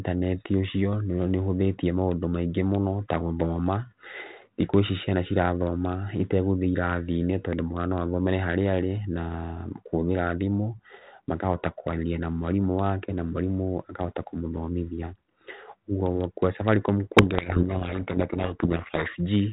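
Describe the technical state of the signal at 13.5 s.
At 13.5 s the signal is intact, with the speech passing through a G.726 ADPCM telephone path at 32 kbit/s that is working normally.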